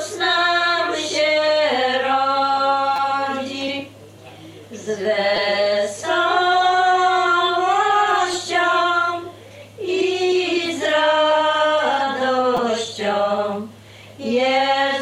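Repeated buffer stutters occur at 2.96–2.98 s, 5.36 s, 8.34 s and 12.57 s. New audio arrived late, so the last 5.8 ms piece replayed several times with hard joins, heard as brief buzzy clicks. The piece length fits a 256-sample buffer, and almost nothing seems lost.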